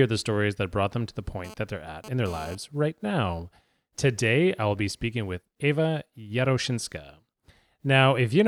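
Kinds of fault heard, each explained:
GSM phone buzz: from 1.45 to 2.55 s, just after "brought them to the" and ending before "right now", a hard, raspy buzz sits about 18 dB below the speech for roughly 1.1 s. A nearby 2G phone sending data transmits in short bursts about 217 times a second, and the audio circuitry rectifies those radio pulses into a 217 Hz buzz rich in harmonics, unrelated to the speech and present only while the transfer lasts.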